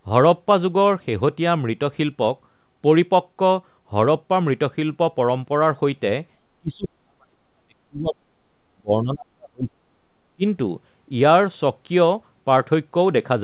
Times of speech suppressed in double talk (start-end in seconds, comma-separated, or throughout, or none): 6.61-8.45, 8.73-9.93, 10.36-10.44